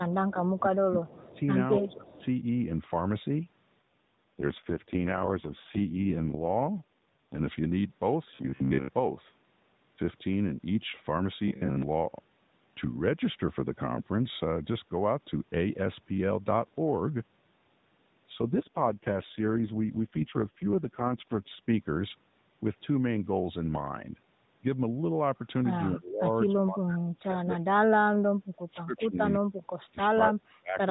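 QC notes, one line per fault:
0.04–1.40 s and 1.78–2.23 s, speech suppressed in double talk: level dips by about 25 dB, then about 15 dB, likely from the echo canceller ducking during overlap. This shows as waveform notches and faded spectrogram bands.
1.05–1.39 s and 2.07–2.25 s, echo leak: a faint delayed copy trails the talker by 275 ms at about 25–30 dB down, likely from residual loudspeaker pickup. This shows as ghost spectrogram striations.
3.82–7.40 s and 18.42–21.67 s, AMR rate drop: the codec falls from 12.2 to 4.75 kbps with no gap and no bandwidth change. The sound turns rough and synthetic, and the spectrogram shows smeared, blocky harmonics.
8.35–8.89 s, robotic sound from repeated short buffers: most of the audio is skipped while short chunks repeat, likely from audio arriving too seldom. This forces a rigid 66.7 Hz metallic buzz, which fits a 15 ms buffer, and shows as evenly spaced vertical striations and a periodic waveform.
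25.95–27.66 s and 28.08–30.77 s, speech suppressed in double talk: deep cuts of about 30 dB, then about 40 dB, across roughly three and a half seconds in total, likely from canceller suppression during simultaneous talk. These show as near-silent waveform gaps and blank spectrogram stretches.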